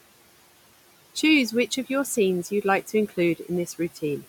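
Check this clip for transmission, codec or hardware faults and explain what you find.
Two processing faults are audible in this speech clip, both from noise suppression.

Noise suppressor artifacts run throughout. The suppressor pulls down bands it judges to be steady noise, here by about 18 dB, frame by frame. The room noise, sitting about 18 dB below the speech, sinks in pauses and returns under speech.

Speech cut by the noise suppressor occurs between 3.66 and 4.03 s. The suppressor mistook quiet parts of the speech for noise and attenuated them by up to about 12 dB. Roughly a tenth of a second in total sounds swallowed and faint.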